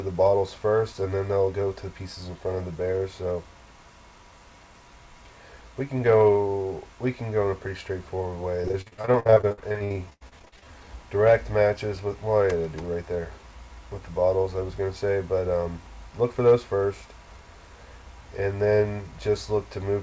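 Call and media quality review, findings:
Repeated packet loss (robotic sound), 8.62–10.65 s. Choppy, robotic stretch; audio drops out repeatedly, longest hole 77 ms. Jitter buffer/PLC: lost or late packets patched by extending the last sound, about 40% of the span concealed.

Waveform: chopped envelope, short flat or repeated-cycle segments. Spectrogram: smeared, frozen harmonics with gaps.

Call path: content stops at 8 kHz across the clip, a hard ceiling on the spectrogram, consistent with a G.722 wideband codec.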